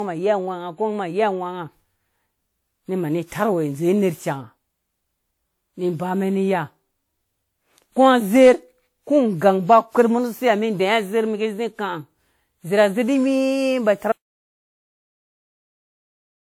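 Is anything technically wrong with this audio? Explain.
Yes, two things. Throughout, the speech has a swirly, smeared, hollow quality with softened consonant attacks, more damage than one decent lossy encode would leave. That's generation loss, most likely from about seven passes through WMA at around 96 kbit/s, each re-quantising on a shifted frame grid so the noise and spectral holes stack up.

Then at 14.12 s there's an audio dropout to silence: the sound cuts out mid-flow and stays silent, with no room tone, for the last 2.4 s to the end of the clip. Whatever was said there is gone.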